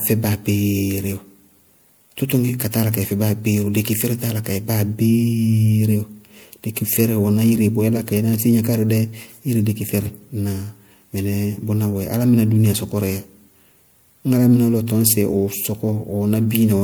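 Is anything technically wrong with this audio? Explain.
Yes. Throughout, the speech sounds swirly, smeared and hollow, with soft attacks and nothing above 20.9 kHz, likely generation loss from several MP3 passes, each adding fresh quantisation damage.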